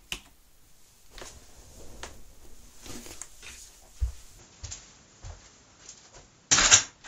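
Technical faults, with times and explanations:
4.39 s to end: input switched to a poorer device, likely; with no gap, everything above 7.6 kHz disappears and new background noise sits about 30 dB down.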